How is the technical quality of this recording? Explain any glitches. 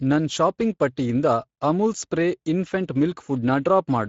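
The recording is compromised by Speex codec damage running throughout the speech clip. Speex is a CELP coder that rebuilds speech from a predicted spectral envelope plus a coded excitation signal. Here the excitation is clearly short of bits, so the voice sounds noisy and hoarse. The damage level points to a middle-quality setting, around 16.8 kb/s wideband. Nothing is present above 7.6 kHz, and the band above 4 kHz is only a shaped, noise-like fill.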